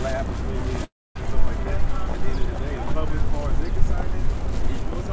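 A recording of everyday sounds, carried over a call link that stops everything above 8 kHz. From 0.84 to 1.17 s the sound smears into a fading buzz or hiss, then about a quarter second of silence, then resumes with a piece missing, likely a long network dropout.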